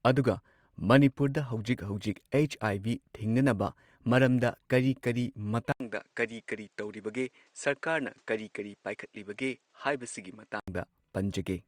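At 5.72 s the speech drops out for 80 ms. It returns duller and slightly quieter, with nothing above 9.1 kHz and faint new background noise. This lasts until 10.68 s. The likely cause is the input switching to a poorer device.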